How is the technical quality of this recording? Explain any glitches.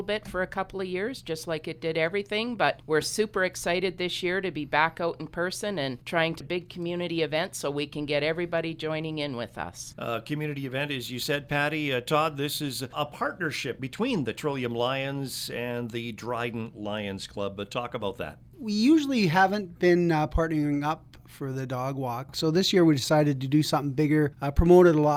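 The recording has two linked timing glitches just past the six-second mark.

At 6.4 s there is a skip ahead: roughly 0.4 s of audio never plays, and the sound on either side is butted together with no silence between. Unlike a dropout, which leaves an audible gap or fill, the jump is seamless, so the missing stretch is noticed only as an abrupt discontinuity.

From 6.49 to 7.55 s a jitter buffer speed-up follows. The receiver, holding more audio than it wanted, trimmed short pitch-period slices repeatedly, removing something like 70 ms and running about 107% speed. The pitch stays the same, which distinguishes this from resampling, so the passage simply sounds slightly hurried.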